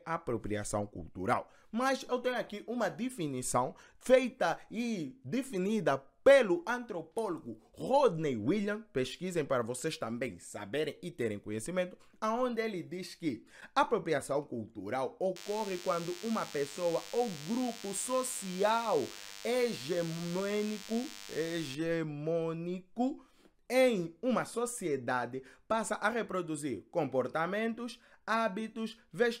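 DECT cordless phone buzz from 15.36 to 21.75 s: the audio circuitry rectifies radio bursts repeating at 100 Hz, producing a thin, harmonic-rich buzz about 15 dB below the sound.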